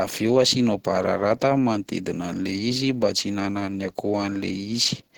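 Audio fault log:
Throughout: Opus compression. The speech sounds hoarse, rough and muffled, with grainy noise filling the upper bands in place of real detail. This likely comes from Opus at a low rate around 16 kbps in its hybrid mode, where the encoder runs short of bits.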